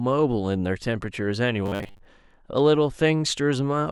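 From 1.66 to 2.06 s the speech goes metallic and buzzy, that robotic sound from repeated short buffers. A fixed 100 Hz drone is imposed, likely from a 10 ms chunk being replayed because fresh audio came too late, with about half the real signal skipped.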